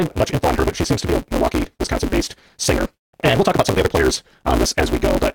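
From start to end the speech runs 1.88 times too fast under a steady 188 Hz buzz, the mark of a block size mismatch (truncated): each block's tail is dropped, which fits a 256-sample read. Unlike a sample-rate error, the timbre stays.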